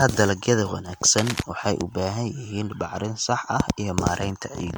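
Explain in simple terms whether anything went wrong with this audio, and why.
The whole recording shows generation loss, most likely from being squeezed by a lossy MP3 codec several times over. Each fresh pass throws away a little more detail, so the speech sounds swirly, hollow and smeared, and the starts of sounds lose their crispness.

From about 1.18 to 1.43 s, just before "waxay u", there is cable scratch noise, likely from a worn cable or connector being moved. Its flickering contact adds a burst of scratching and rustling over the speech for that quarter second.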